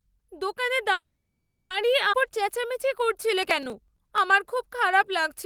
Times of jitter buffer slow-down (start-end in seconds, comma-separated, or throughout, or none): 2.22-5.45